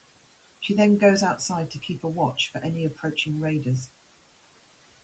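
Noise suppressor artifacts run the whole way through: the room noise, sitting about 17 dB under the speech, gets pulled down about 18 dB between words, then pumps back up underneath them. At 2.35 to 2.63 s and again at 2.95 to 3.26 s, the suppressor mistakes bits of speech for noise and cuts them by up to about 12 dB, roughly a tenth of a second or a bit more each time, so those sounds come out swallowed.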